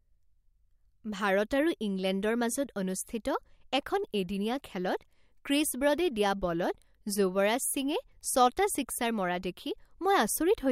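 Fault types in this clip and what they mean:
Listening through the speech, nothing stood out as a technical problem.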